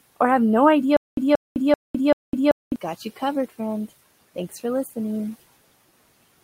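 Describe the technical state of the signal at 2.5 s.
At 2.5 s the signal is inside a stutter with silent gaps running from 0.97 to 2.76 s, between "or have no" and "got you". A 180 ms fragment repeats four times, separated by 207 ms of digital silence, likely from a stalled stream replaying its last buffer.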